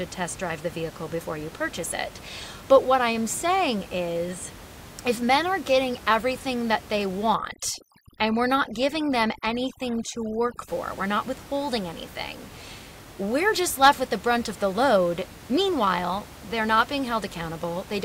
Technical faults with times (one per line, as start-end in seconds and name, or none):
7.35-10.68 overdone noise removal